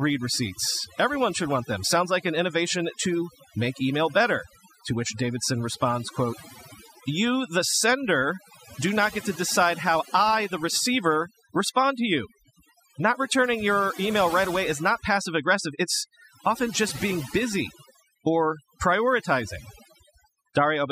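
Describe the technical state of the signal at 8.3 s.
At 8.3 s the speech is under overdone noise removal, which runs through the whole clip. The noise reducer is set far too aggressively, so any frequency band whose level sits close to its noise estimate is pulled down hard or shut off entirely, and the softer components of the speech are cut along with the noise. The result is a lowered background broken up into chirpy, twinkling fragments.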